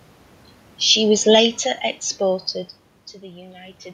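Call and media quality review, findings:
Automatic gain falling, 0.95 to 3.2 s: AGC judged input too loud, pulled gain down about 12 dB gradually; speech and room noise sink together, coinciding with talker movement around 1 s.

Automatic gain rising, 3.14 to 3.86 s: after input dropped about 11 dB, possibly the talker moving near 2.5 s, AGC raised gain about 3 dB; speech and background swell slowly together.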